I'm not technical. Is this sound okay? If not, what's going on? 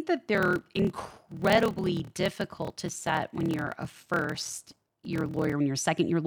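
No. From 0.33 s to 5.54 s there's a block size mismatch (padded): audio arrives in chunks too short, with silent gaps filling the rest. That causes a steady buzz around 38 Hz and slows the speech to about 0.89 times normal speed, starting just before "when you're a". Unlike a wrong playback rate, the timbre stays the same.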